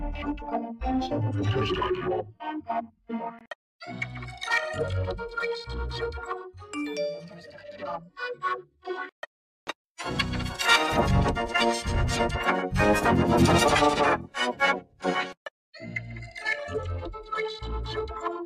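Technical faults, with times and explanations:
No technical faults can be heard, and the signal holds steady and continuous with nothing disturbing it at any point.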